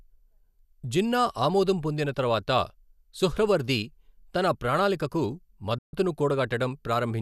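At 5.78 seconds the receiver stopped getting usable digital frames, either because the signal dropped or because frames failed their checksum. It muted until valid frames returned at 5.93 seconds. This is a digital broadcast dropout. The speech fades to silence over about 3 ms, so the cut is abrupt but not clicky, and a hole of about 144 ms follows, which fits roughly six lost frames. Whatever was transmitted during that gap is gone for good.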